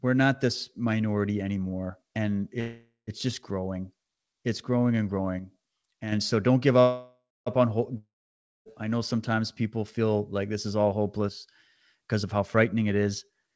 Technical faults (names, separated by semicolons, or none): call audio freeze; one channel drops out; long network dropout; jitter buffer speed-up